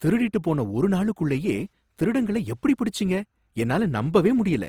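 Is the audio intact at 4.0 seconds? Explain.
No. At 4.0 seconds, as through the whole speech clip, the signal has likely passed through Opus compression in its CELT music mode, with a bit budget that fits roughly 24 kbps. Starved of bits, the encoder preserves each band's energy but fills the detail with folded copies of lower bands or noise. The result is plainly audible: speech that sounds grainy and rough, with a noisy texture, though the bandwidth stays full, reaching about 20.4 kHz.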